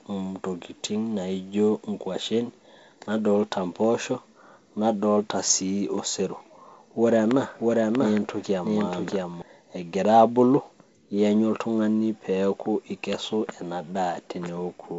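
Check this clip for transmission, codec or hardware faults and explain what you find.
One fault stands out: a doubled audio track between 7.60 and 9.42 s. From 7.60 s, a second full-band copy of the speech runs roughly 0.7 s behind at about the same level, with no decay or room colouring, and cuts in and out abruptly. The likely cause is a slower second capture path or an edit holding two copies out of step. The wideband telephone coding sits underneath, with nothing above about 7.7 kHz and light upper-band hiss.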